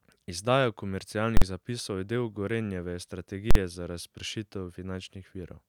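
At 1.37 s the speech jumps to one extreme value and stays there until 1.42 s, just before "zapisov je". The same fault, invalid numbers at full scale, returns from 3.51 s to 3.55 s. In both cases a calculation produced infinite or invalid values, which were pinned to the maximum level. Each span lasts about 46 ms, which fits a 2048-sample processing block. Each is heard as one very loud bang.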